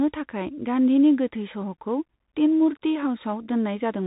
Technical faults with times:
0.00-4.06 Bluetooth CVSD headset codec

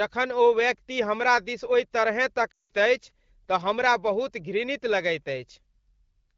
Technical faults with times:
2.53-2.71 lost AMR speech frames

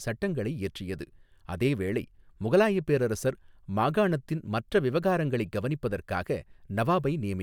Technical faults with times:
none

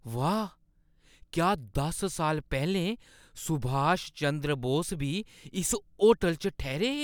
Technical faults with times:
none

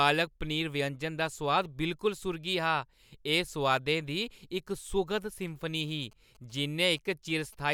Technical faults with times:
5.88-7.55 GSM signalling bursts

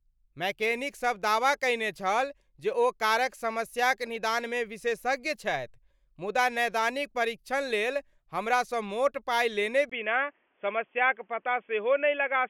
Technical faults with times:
9.89-12.50 input switched to a poorer device

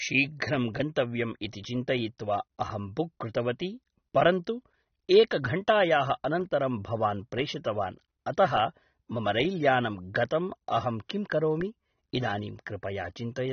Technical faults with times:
0.00-13.53 AAC compression

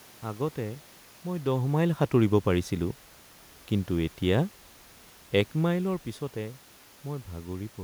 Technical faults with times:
none

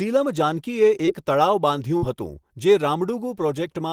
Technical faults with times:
1.05-1.09 short concealed packet loss
1.97-2.04 burst of packet loss

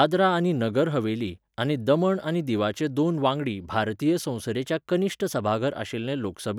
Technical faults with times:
4.55-5.40 drift correction step

